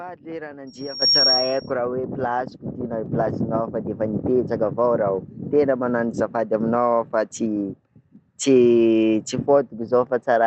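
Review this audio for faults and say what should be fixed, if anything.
A loudspeaker feedback squeal runs from 0.67 to 1.71 s: a pure 5.6 kHz tone swells over roughly 0.4 s to about 10 dB above the speech, because the microphone hears its own loudspeaker and the loop gain exceeds one there. Unlike an interfering whistle, it grows from nothing rather than starting at full level. Prevent it with headphones, lower speaker volume or effective echo cancellation.

The microphone volume is stepped up at 1.02 s, by about 10 dB, and again at 3.06 s, by about 3 dB, as automatic gain control raises the input level in single jumps. Speech and background rise together, which distinguishes this from a talker simply getting louder. Disable automatic microphone gain and set a fixed input level.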